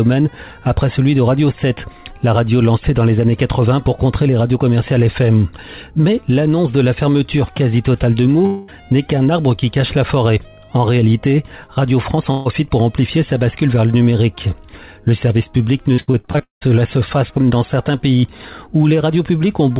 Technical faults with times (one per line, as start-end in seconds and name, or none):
8.46-8.70 long network dropout
12.16-12.19 short concealed packet loss
12.31-12.47 burst of packet loss
15.93-16.63 repeated packet loss (robotic sound)